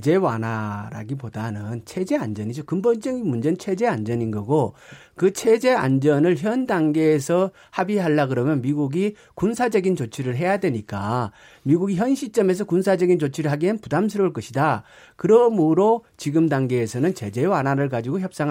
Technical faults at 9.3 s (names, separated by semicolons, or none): none